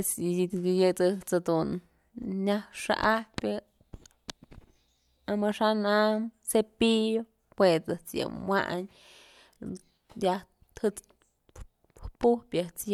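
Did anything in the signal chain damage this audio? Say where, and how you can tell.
No, nothing in the signal chain damaged this audio.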